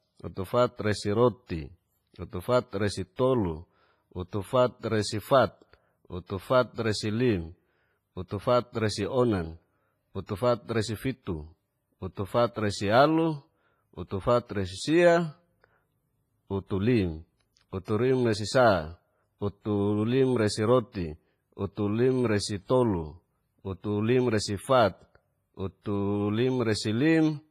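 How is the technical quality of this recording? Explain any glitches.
The recording's technical quality is poor: heavy codec damage throughout, plus four smeared attacks.

WMA compression: The speech sounds washy and ringing, with hiss that swells and fades with the voice and nothing above 15.5 kHz. This is likely heavy WMA compression at a low bitrate around 24 kbps, where long transform blocks smear quantisation noise and weak detail is discarded.

Pre-echo: At 3.16, 6.26, 10.26 and 17.85 s, a brief hiss creeps in just before a sharp onset, lasting 28, 34, 28 and 32 ms, and each attack sounds blurred. The codec spread noise meant for the loud attack across its whole block, including the quiet moment before it.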